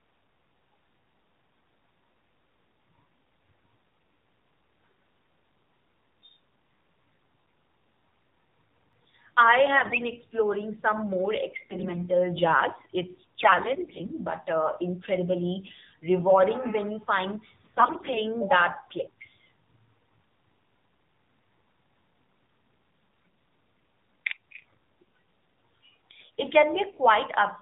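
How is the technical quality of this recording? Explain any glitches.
Technical quality is poor: the speech is heavily band-limited and codec-coloured, with one skip and several bursts of corrupted sound.

AMR narrowband mobile codec, throughout: the speech is rebuilt from a vocal-tract model at 8 kHz, so a spectrogram shows nothing above 4 kHz, and the buzzy, synthetic tone fits a low rate near 7.4 kbps.

Dropped buffer (overrun), at 8.93 s: a short jump where roughly 15 ms of sound vanishes and the edges are butted together, likely from samples being overwritten before collection. The waveform shows a sudden discontinuity, not a gap.

AMR bit errors, at 9.74–10.09 s, 11.62–12.06 s (just after "some more"), 13.40–14.09 s (just before "but uh incredibly rewarding"), 17.64–18.20 s (between "rewarding when you find" and "that clicks"), 24.61–24.74 s and 26.90–26.99 s: flipped bits misplace the excitation pulses and skew the spectral values, so the speech turns hoarse and gargly while keeping its pitch and level. 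A spectrogram shows smeared, noisy formants in 20 ms blocks.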